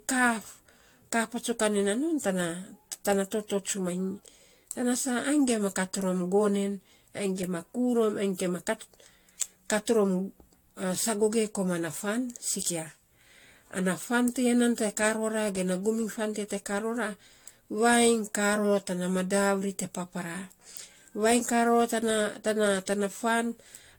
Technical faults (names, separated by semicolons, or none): generation loss